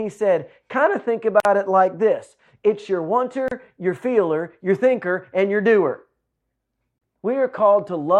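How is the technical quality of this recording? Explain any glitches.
The recording has one recurring problem: a gap at a join of encoded pieces, three times. Short silences open at 1.40 s (about 49 ms, after "said kind of think"), 3.48 s (about 32 ms, before "your feeler your thinker") and 6.98 s (about 32 ms). The speech was encoded in separate chunks and stitched together untrimmed, so each encoder's start-up silence and last-frame padding stayed in. You hear a sudden dropout with softened edges, then the speech picks up exactly where it left off.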